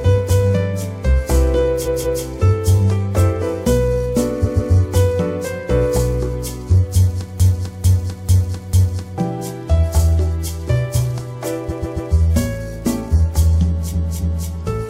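The sound stutters four times with repeated frames: at 1.84 to 2.21 s a 0.19 s block plays twice more, at 4.44 to 4.72 s and 11.68 to 12.10 s a 0.14 s block repeats two and three extra times, and at 13.91 to 14.47 s a 0.28 s block twice more. Each adds time without losing any. A broken-record loop from 7.40 to 9.18 s is different: a 0.45 s fragment repeats four times back to back, likely from a stalled player, encoder or stream, and the audio due in that span is lost.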